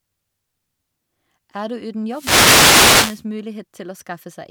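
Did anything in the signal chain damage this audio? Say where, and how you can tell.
Yes. The damage comes from the radio link of an analogue FM wireless microphone, ahead of any digital stage. From 2.09 to 3.25 s there is a wireless microphone noise hit: a burst of static swishes over the speech for just over a second and then clears. Reflected paths momentarily cancel the transmitter's carrier at the receiver, so the weakened signal lets receiver noise rise until the fade passes.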